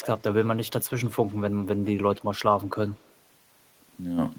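A delayed copy of the speech trails the direct sound by about 160 ms at 0.01–0.23 s, 0.66–1.36 s, 2.2–2.39 s and 2.88–3.15 s. This echo leak is most audible at the start, roughly 15 dB down, then fades to faint scraps. It is likely a far-end speakerphone whose echo canceller let residue through. Unlike room reverberation, it is a distinct, fixed-delay repeat that comes and goes rather than a smooth decaying tail.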